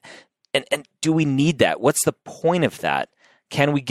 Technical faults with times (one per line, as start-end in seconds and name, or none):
none